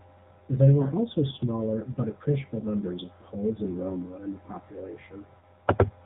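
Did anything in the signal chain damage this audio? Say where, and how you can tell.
Yes, in two places: the codec stage and the radio link that carried it.

The speech went through the AMR narrowband mobile codec, and the damage is plainly audible across the whole clip. Nothing above 4 kHz survives, so the top end is cut off sharply. The voice sounds buzzy and synthetic, the way a vocal-tract model driven by sparse pulses sounds when it is starved of bits. That fits one of AMR-NB's low-rate modes, around 7.4 kbps.

On top of that there are lost AMR speech frames, at 0.82 to 0.88 s, 2.60 to 2.66 s and 5.40 to 5.44 s. Each sounds like a single 20 ms frame that failed its checksum over the air. The decoder covered each gap by reusing the last good pitch and vocal-tract settings at reduced gain. At each of those three moments, that produces a brief dip and warble in the speech.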